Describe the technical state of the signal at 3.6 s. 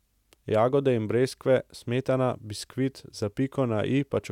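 At 3.6 s the speech signal is intact, with no dropout, clipping, glitch or other fault audible at that point.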